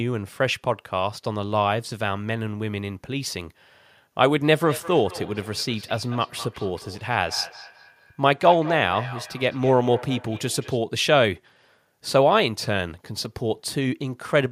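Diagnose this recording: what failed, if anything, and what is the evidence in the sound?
The failure is in call processing: feedback echo between two devices, from 4.64 s to 10.84 s. Each stretch of speech returns about a fifth of a second later, at most about 15 dB below the direct speech. Two devices in the same room share the call, so one plays back what the other's microphone sent, and that microphone captures it again. Neither echo canceller removes sound played by the other device. A spectrogram would show fainter duplicate copies of the speech patterns offset by that interval.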